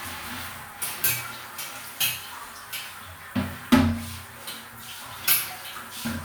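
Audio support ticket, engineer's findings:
No fault found on review; sound and playback behave as expected across the clip, no component implicated, nothing to escalate.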